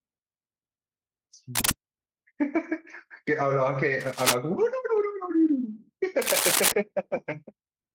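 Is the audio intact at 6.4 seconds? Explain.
No, not quite. From about 6.22 to 6.72 s there's a burst of cable scratch noise, roughly half a second of dense, ragged scratching and rustling sitting on top of the speech and a bit louder than it. The likely cause is a worn cable, plug or control being moved, so its contact resistance jumps around rapidly and chops uneven noise into the signal right at 6.4 s.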